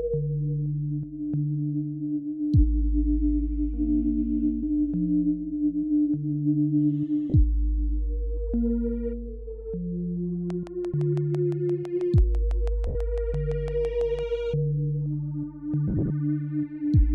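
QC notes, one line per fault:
7.30–7.34 s, 12.87–12.95 s, 15.88–16.10 s: lost LE Audio frames. Gaps of 40 ms and 80 ms, then 120 ms lost across 220 ms in runs up to about 40 ms. The LC3 decoder repeats the last spectrum with random signs, so tones smear into noise.
10.50–14.20 s: train of clicks. About 20 similar clicks at a regular 6 per second, peaking roughly 5 dB above the signal, likely from interference from nearby equipment.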